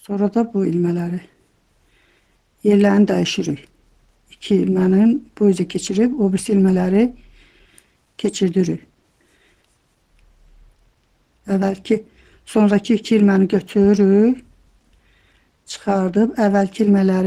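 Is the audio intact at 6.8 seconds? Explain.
No. Clock drift between sender and receiver runs through the whole clip. The sender's clock is roughly 4 percent fast, so the receiver's buffer keeps overfilling. Repeated timing corrections span 0.09 to 16.9 s, including 6.8 s. The receiver trims short pieces to keep up, running at 104 percent speed. These edits are small and are heard, if at all, as slight hiccups or an unsteady tempo.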